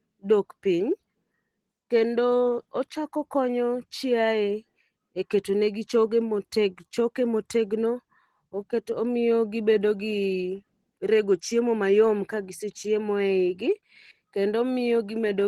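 Throughout this speech clip the sound is hoarse and slightly robotic, with plainly audible codec damage. That is Opus voice compression: coarse excitation coding in hybrid mode with 20 ms frames, which fits a low bitrate of around 16 kbps.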